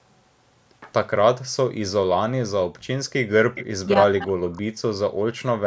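From 2.78 to 2.82 s the room sound drops away sharply, by about 40 dB, and then returns. This is background gated by the echo canceller: with the loudspeaker active, the canceller briefly clamped the microphone so hard that the ambience vanished.

Between 3.55 and 3.65 s a faint repeat of the speech appears, trailing the original by 333 ms and sitting well below it in level. This is an echo leak, likely from a far-end loudspeaker whose echo canceller let part of the playback back into its microphone.

From 3.82 to 4.6 s the speech sinks deeply for most of that stretch. This is speech suppressed in double talk. The likely cause is both sides talking at once, so the canceller could not separate the talker from the loudspeaker echo and turned everything down.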